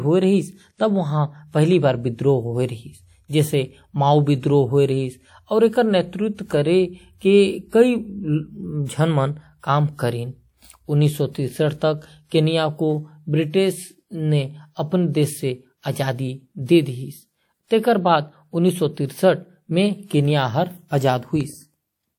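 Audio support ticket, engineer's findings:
Pre-echo, 8.85 to 8.89 s. Transform codec block spreading quantisation noise sized for a sharp speech attack back into the quiet lead-in. About 39 ms of hiss ahead of the onset; attack itself softened and smeared.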